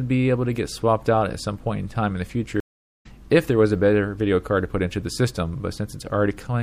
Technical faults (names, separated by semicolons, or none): MP3 compression; stream reconnect